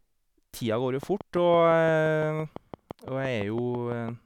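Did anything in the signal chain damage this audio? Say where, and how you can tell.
Yes. A train of clicks runs through the speech from 1.03 s to 4.10 s. About twenty near-identical pops arrive at a steady 5.9 per second, peaking about 5 dB above the speech. Such regular pulses are likely interference picked up in the analogue wiring.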